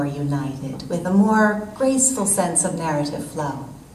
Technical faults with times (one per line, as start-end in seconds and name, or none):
none